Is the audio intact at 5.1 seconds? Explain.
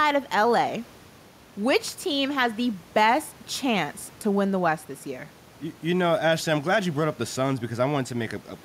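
Yes, the speech at 5.1 seconds is intact, with only the room's own background noise sitting about 28 dB below it.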